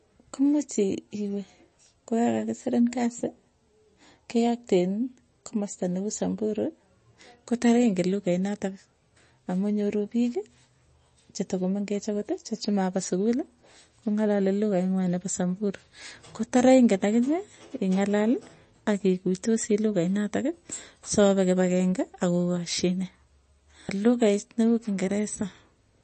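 From start to finish the speech has a hard ceiling. Nothing sounds above 8.3 kHz, so s sounds lose their top and turn dull. The damage is plainly audible. Quiet detail seems to flicker in and out, giving a watery, swirly texture, and consonant attacks smear. This is likely MP3 compression. Short of bits, the encoder cut the treble and dropped weak frequency lines frame by frame. That fits a very low bitrate, near 33 kbps.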